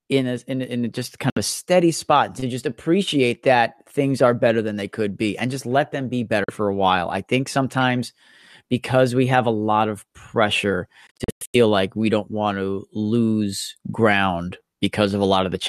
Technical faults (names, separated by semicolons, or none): Bluetooth dropout